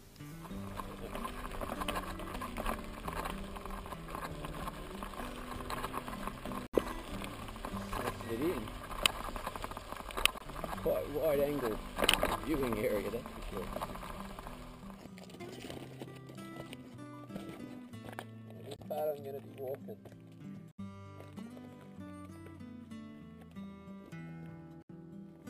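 Five abrupt holes of pure silence cut into the audio at 6.67–6.78 s, 10.38–10.42 s, 18.76–18.81 s, 20.71–20.80 s and 24.82–24.91 s. These are corrupt frames muted: damaged compressed frames were rejected by the decoder and replaced with silence. Each gap spans what sounds like a few whole frames. Unlike concealed packet loss, nothing is smoothed over, and unlike a skip, the surrounding timing stays intact.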